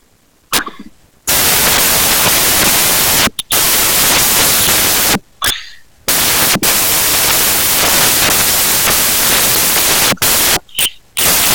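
From the first moment to the end, the speech comes with loud, hissing white noise, the signature of samples built from the wrong bytes. Each sample has been assembled with its bytes misplaced, so the rapidly changing low-order bits land in the most significant position and dominate every value. Unlike ordinary background hiss or dither, this noise tracks the signal: it comes from the speech itself rather than sitting at a steady floor.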